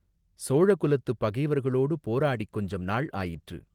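Speech, and right after "சோழ குலத்துப் பகைவர்களோடு", at about 2.24 s, you get a call bitrate drop that lasts to the end of the clip. The call's bandwidth estimate sagged, so the encoder went from about 32 kbps down to 18 kbps and sat there for roughly 1.4 s. At that rate Opus codes everything more coarsely and trims the top end, so the voice goes rough, watery or duller for the rest of the clip.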